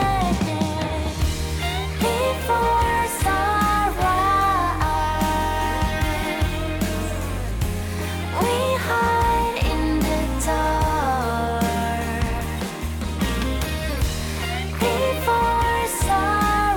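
No technical faults can be heard anywhere in this audio.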